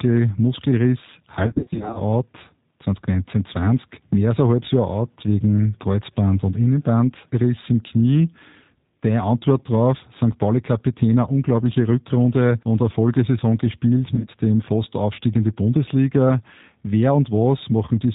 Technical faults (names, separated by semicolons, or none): G.729 codec; VoIP packet loss concealed by the speech codec